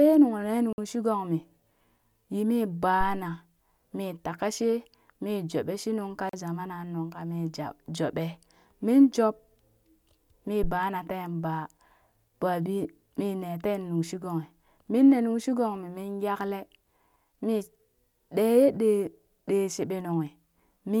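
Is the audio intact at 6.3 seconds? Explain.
No. At 6.29 s the speech drops into a block of digital silence lasting 40 ms, until 6.33 s. The samples there were zeroed, probably because the output buffer wasn't filled in time. The abrupt cut and return are heard as a short hole.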